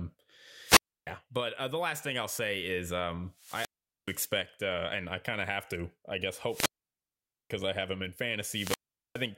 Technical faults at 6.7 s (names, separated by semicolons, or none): wireless microphone squelch dropout